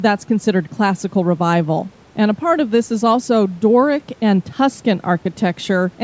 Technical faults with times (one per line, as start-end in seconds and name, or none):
none